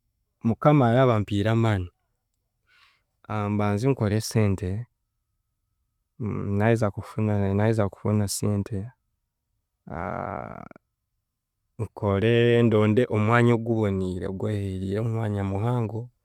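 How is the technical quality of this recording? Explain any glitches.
The recording has no audible technical glitches. Nothing in it calls for explanation.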